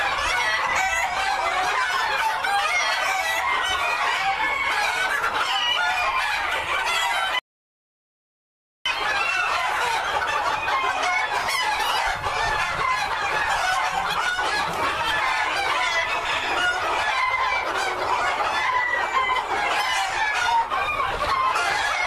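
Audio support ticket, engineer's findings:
Audio dropout to silence, 7.39 to 8.86 s, about 1.47 s lost. Hard cut to silence, no room tone. Likely input link or device disconnect, encoder writing silence. Unlike a noise gate: no fade or residual floor.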